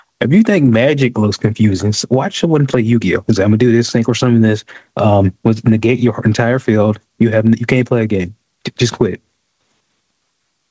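Speech with gain pumping throughout: the gain swings by about 10 dB, ducking under each loud syllable and squashing loud and soft passages together. The likely cause is gain set far too high feeding a fast limiter. On a waveform, the envelope looks flattened. The spectrogram shows a hard ceiling at 8 kHz, consistent with a wideband call codec such as G.722.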